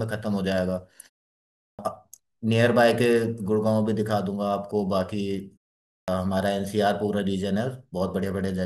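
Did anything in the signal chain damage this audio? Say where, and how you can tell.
Yes. A clipped start after a pause occurs at 1.53 to 1.79 s and at 5.83 to 6.08 s, at the playback stage. After pauses of 0.52 s and 0.34 s, the output device sleeps and needs about a quarter of a second to wake, so roughly 257 ms and 250 ms of speech vanish. On a waveform, the sound begins abruptly at full level with no onset ramp. On a spectrogram, energy starts as a hard vertical edge with the opening sounds missing. The muted pauses themselves cost no speech.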